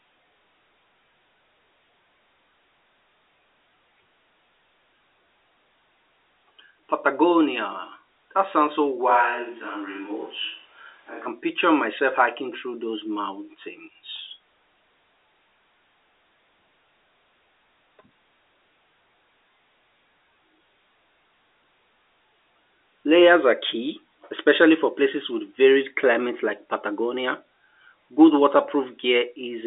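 From 9.11 to 11.25 s the speech turns hollow and roomy, with thinner bass and a noise floor around 30 dB below it, though the level barely changes; a switch to a distant microphone is the likely cause. On a spectrogram the low end thins, reverberant smear blurs the gaps, and background noise fills the pauses within the 300 Hz to 3.7 kHz telephone band.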